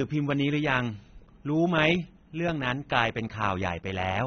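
From start to finish the speech is band-limited, with nothing above 6.3 kHz, and carries a plainly audible warbling, smeared texture that likely comes from AAC compression at a low bitrate, near 27 kbps. That swirl on sibilants separates it from simple low-pass filtering, which only dulls.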